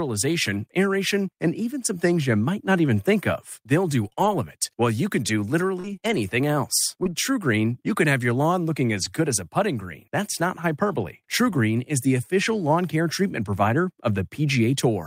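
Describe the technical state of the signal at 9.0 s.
A lost packet rebuilt from error correction sits at 8.97 to 9.03 s, between "have your lawn looking" and "good as a putting". The original audio never arrived, and what plays instead is a low-bitrate backup copy carried inside the following packet, about 40 ms of rebuilt sound, which fits two lost packets. There is no silence or dropout, but that stretch sounds briefly rougher and grainier than the surrounding speech.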